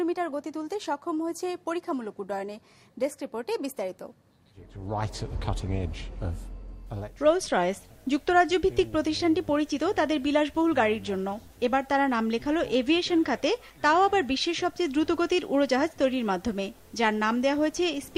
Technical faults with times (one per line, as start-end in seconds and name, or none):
none